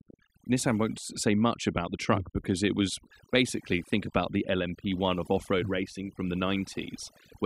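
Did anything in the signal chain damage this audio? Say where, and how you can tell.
Yes: overdone noise removal at the processing stage runs throughout the speech, with gaps between phrases near-silent but twinkling, because bands near the noise estimate are muted.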